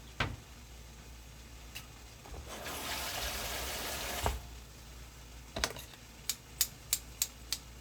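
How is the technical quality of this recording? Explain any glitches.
No technical glitches can be heard in this recording.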